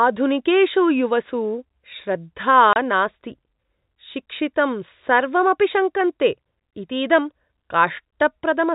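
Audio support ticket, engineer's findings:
Dropout 2.73–2.76 s, a 30 ms hole of dead silence with hard edges. Packet loss filled with silence: the receiver inserted zeros where audio never arrived. A single gap this length fits one lost packet of 30 ms. Jitter buffer or network path is the probable component. The telephone band limit at 4 kHz is from the G.711 telephone coding, which is working as designed.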